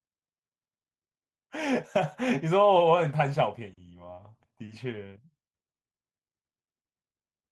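Speech carried over a call path, with the top end stopping around 12 kHz as expected from an Opus-coded link, and no faults to report.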